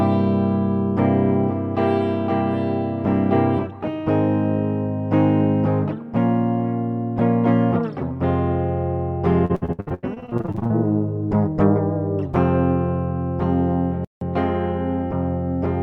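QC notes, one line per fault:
9.45–10.72 s, repeated packet loss (robotic sound): close to twenty packet dropouts, the longest 85 ms, each patched by stretching the previous sound, so about half this span is concealment. The sound turns choppy, with pieces audibly missing.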